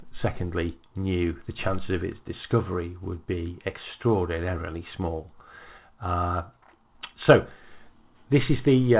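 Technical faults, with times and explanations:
No technical faults can be heard in this clip.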